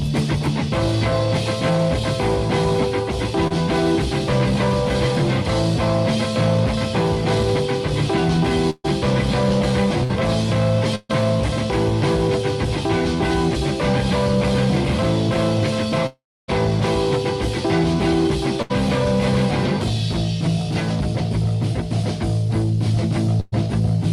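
At 3.47 s there is a short concealed packet loss: about 20 ms of audio never reached the decoder in time, and the receiver bridged it by extending the preceding sound for roughly 28 ms before blending back. It registers only as a brief smear or wobble. Unlike the bursts later on, it is too short for any audible fade.

From 8.70 to 11.11 s comes repeated packet loss with a robotic sound. Three separate gaps, the longest 138 ms, take out about 340 ms of audio. Each hole is patched by continuing the last sound, so this stretch turns choppy, with fragments missing. What sets it apart from a single burst is the recurrence: the patches keep arriving across more than two seconds instead of as one isolated hole.

At 16.06 to 16.50 s the audio buzzes or hisses briefly, fades, and then goes silent for about 280 ms before returning further along, with roughly 420 ms gone. This is most likely a long network dropout. 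It is distinguished from a burst by the true silence after the concealed tail decays, which shows that the receiver stopped extending the sound and simply waited.

A burst of packet loss occurs at 18.62 to 18.72 s, where about 80 ms is missing. Another, at 23.40 to 23.54 s, loses about 120 ms. In each, the last sound is held and turned down through the gap, as a fading buzz or hiss, and the audio then resumes past the lost section. The second burst never reaches silence. That separates it from the dropout.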